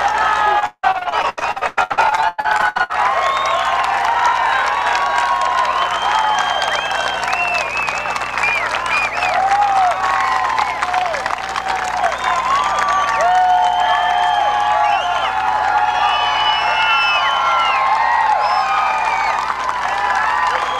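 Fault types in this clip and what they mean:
Repeated packet loss (robotic sound): from 0.59 to 2.91 s the stream keeps dropping chunks, with a couple of dozen holes, the longest 174 ms. Each gets papered over by stretching the last bit of sound, so nearly half that stretch is patched filler and comes out choppy and robotic.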